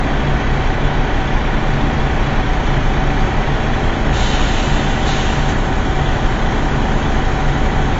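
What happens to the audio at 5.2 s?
At 5.2 s you're hearing the same thing that runs through the whole clip: AAC compression, likely at a low bitrate. Nothing survives above about 7.6 kHz, and the coarsely quantised spectrum leaves the audio dull and smeared, with a watery, fizzy texture.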